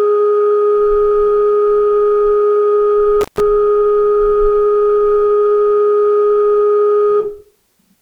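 At 3.21 s the music drops out through 3.40 s, a classic intermittent contact: a loose plug opening for roughly 146 ms, crackling at both edges with faint hiss between.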